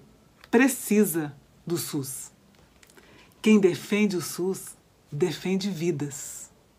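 Nothing in this audio goes wrong: there are no dropouts, glitches or other faults anywhere along the way.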